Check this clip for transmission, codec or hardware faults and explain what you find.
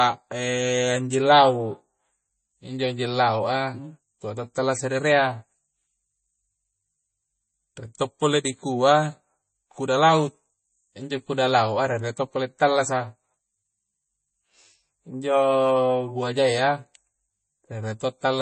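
One fault runs through the whole clip. It sounds like MP3 compression, most likely at a low bitrate in the region of 32 kbps. The damage is plainly audible. Nothing is heard above 8.3 kHz, so the speech has a dull, capped top end. Short of bits, the encoder drops quiet frequency lines, and they flicker in and out between frames. That gives a watery, swirling texture. Sibilants turn metallic and chirpy. Consonant onsets smear.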